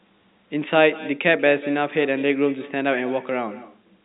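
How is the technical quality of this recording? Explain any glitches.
The recording has one persistent glitch, an echo with no canceller, running under telephone-band speech whose content stops at about 3.8 kHz.

Throughout the clip, every phrase returns around a fifth of a second later as a thinner copy about 18 dB quieter. The far end's loudspeaker leaks into its microphone and nothing subtracts it. On a spectrogram, each syllable's pattern repeats shifted right and fainter. The waveform shows small trailing bursts.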